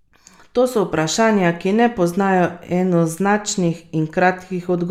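No faults found; the speech runs without dropouts, glitches or level problems.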